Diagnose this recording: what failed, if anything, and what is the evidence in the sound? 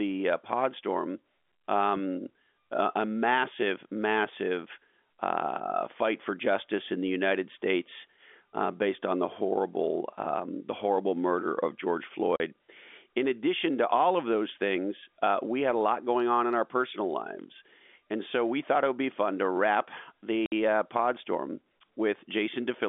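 Packet loss filled with silence at 12.36 to 12.40 s and 20.46 to 20.52 s, a network-stage fault. The speech drops out completely for 40 ms, then for 60 ms, with abrupt edges. Both gaps are whole multiples of 20 ms, which fits 20 ms packets going missing in transit. The receiver inserted silence rather than concealing the loss, all on a telephone-band line limited to roughly 250 Hz to 3.5 kHz.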